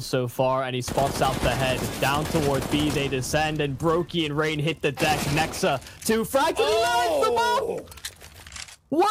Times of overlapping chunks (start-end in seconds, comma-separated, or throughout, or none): 2.28, 8.31